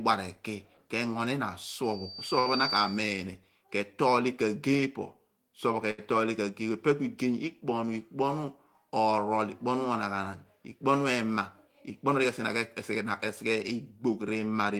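At 1.83 s a loudspeaker feedback squeal starts: the microphone is re-amplifying its own loudspeaker output, and the loop gain exceeds one at 4.6 kHz. The tone swells over roughly 0.7 s to about 5 dB above the speech and stops at 3.18 s. On a spectrogram it appears as a single bright horizontal line at 4.6 kHz that thickens as it grows.

Inside that squeal, at 2.39 s, comes a short stall from a late packet. The jitter buffer ran dry, and the receiver held the last sound for 63 ms before resuming without any loss. A second stall at 5.91 s holds the sound for 75 ms. Each appears as a brief frozen, smeared stretch on the spectrogram, with repetitive cycles in the waveform.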